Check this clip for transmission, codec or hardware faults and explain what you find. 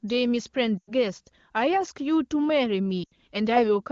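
Two transmission faults, both lost AMR speech frames. At 0.78 to 0.92 s and again at 3.03 to 3.13 s, the speech fades and within two frames drops to near silence. Each gap, about 100 ms then 80 ms, fits four or five 20 ms frames corrupted on the radio link. The wideband decoder fills them by repeating the last good pitch and vocal tract settings at falling gain.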